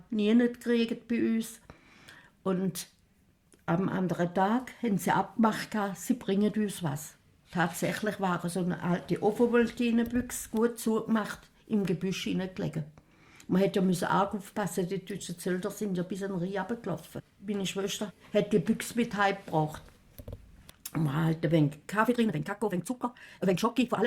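The audio carries a time-stretched section over its last two seconds, from 22.03 s to the end at 24.07 s. Here the pace jumps abruptly to about 1.89 times normal speed, yet the pitch stays where it was. The sped-up passage sounds rushed. This is likely software squeezing the audio to fit a set length. It keeps the pitch by dropping short pieces of sound.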